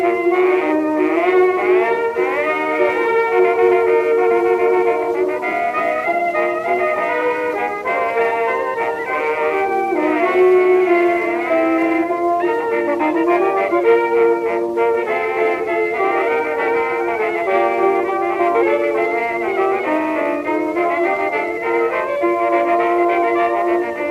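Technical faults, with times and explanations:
Nothing technical goes wrong anywhere in this clip, so there's nothing to flag.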